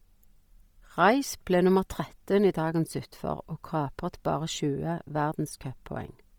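Right through the speech the highs turn breathy and grainy, likely heavy Bluetooth LC3 compression, its noise-filled top end fitting a bitrate around 32 kbps.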